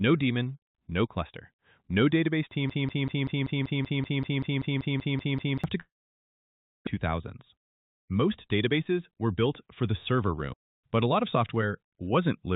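From 2.70 to 5.64 s the player, encoder or stream likely stalled and kept resending the last fragment it held. The result is a broken-record loop: a 192 ms piece repeats exactly, back to back, 15 times, and the audio that belonged there is lost.

Next, from 5.80 to 6.89 s, a long network dropout likely cut off the incoming audio, and about 1.0 s of it never plays. The receiver briefly stretches the last sound into a fading buzz or hiss, then 970 ms of near-silence follows. The sound returns with the missing stretch gone, and playback now runs roughly 50 ms later than before.

Between 7.55 and 8.49 s the jitter buffer holds more audio than its target, so the receiver trims many short pitch-period slices in a row, around 50 ms in total. This jitter buffer speed-up makes the audio run at 104% with unchanged pitch. Throughout, the call path's band limit means nothing is heard above 4 kHz, which fits G.711 mu-law at 64 kbps.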